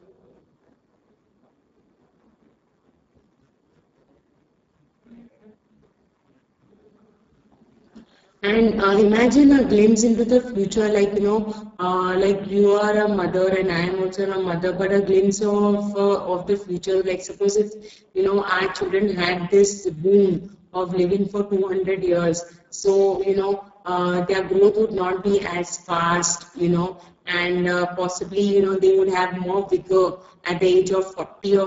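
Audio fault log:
throughout: Speex codec, heavy damage. Too few bits reach the excitation, so the speech sounds hoarse, noisy and edging toward robotic, which fits a very low bitrate near 6 kbps. The upper band is only shaped noise fill, with nothing above 7.6 kHz.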